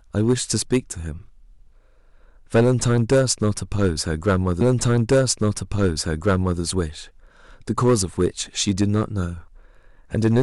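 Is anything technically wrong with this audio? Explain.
Yes, there are two faults. Hard clipping runs through the whole recording. The speech has been driven about 8 dB past what some stage in the chain could pass, so the loudest peaks are sliced flat, around 2 percent of the samples. Those squared-off tops add high harmonics that were never in the source, so each emphatic syllable carries a brittle crackle, while quieter passages stay clean.

A stream segment is repeated from 4.60 s to 6.60 s. The player queued or fetched the same chunk of audio twice, so roughly 2.0 s of speech plays a second time and the clip runs about two seconds longer than it should. At the point where playback jumps back to the start of the duplicated section, a brief blip marks the discontinuity before the repeated material continues as though nothing happened.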